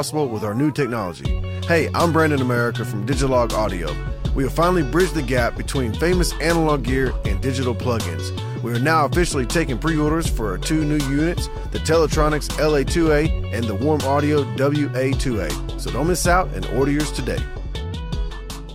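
No technical faults can be heard anywhere in the signal.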